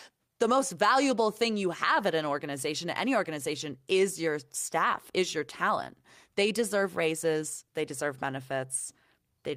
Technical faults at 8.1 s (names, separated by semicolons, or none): clock drift between sender and receiver; repeated timing corrections